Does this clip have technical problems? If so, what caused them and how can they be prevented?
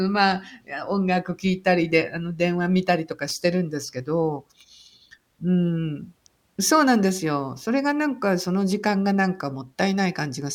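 Yes: loose connector crackle at 3.28 to 3.31 s, where a worn or dirty contact briefly made and broke the circuit, chopping the speech signal, heard as a short ragged scratch. Clean or replace the connector and strain-relieve the cable.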